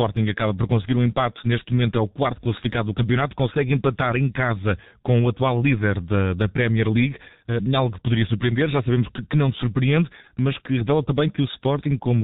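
Throughout the speech the sound is muffled and hoarse, with consonants smeared together and nothing audible above 4 kHz. This is heavy G.723.1 codec damage: a narrowband telephony coder at around 6.3 kbit/s, working in 30 ms frames, whose slowly updated voice model blurs fast detail.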